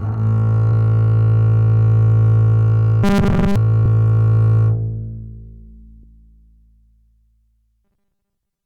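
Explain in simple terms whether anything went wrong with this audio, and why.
Compressed frames skipped at 0.72, 3.86 and 6.03 s: the music jumps ahead by roughly 0.2, 0.1 and 0.15 s, which fits whole 32 ms chunks being lost or rejected by the player.

Robotic sound from repeated short buffers from 3.04 to 3.56 s and from 7.85 s to the end: the music turns into a stiff metallic buzz at 200 Hz. The likely cause is the player repeating a tiny 5 ms snippet over and over while most of the real audio is skipped.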